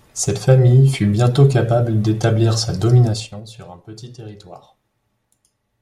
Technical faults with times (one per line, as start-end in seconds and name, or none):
3.04-3.44 zipper noise